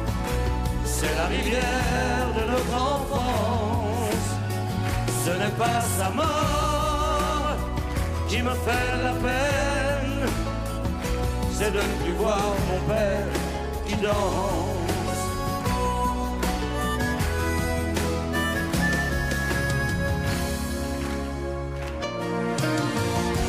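No technical faults can be heard anywhere in this clip. Nothing in the audio calls for comment.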